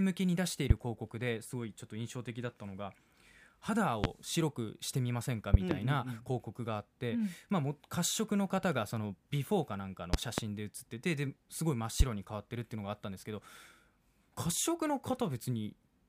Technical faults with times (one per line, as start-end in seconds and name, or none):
0.70-0.73 loud pop
4.04-4.07 loud pop
5.54-5.74 loud pop
10.14-10.41 loud pop
12.00-12.03 loud pop